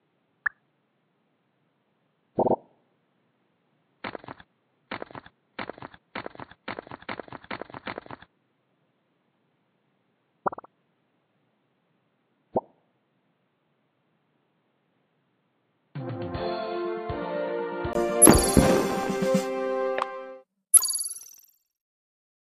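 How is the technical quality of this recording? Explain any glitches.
The quality is compromised for most of the clip. The system likely had its input switched to a poorer device from the start until 17.95 s. That narrower path passes nothing above 4.4 kHz, so the sound is dull and boxy, a few decibels quieter, with faint added background noise. At 17.95 s a brief 20 ms gap marks the switch back, and the sound clears.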